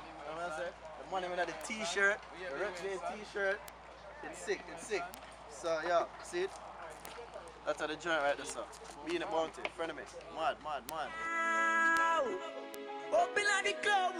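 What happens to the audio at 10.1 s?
Nothing goes wrong at 10.1 s; the audio plays through that moment intact, with no fault to be heard.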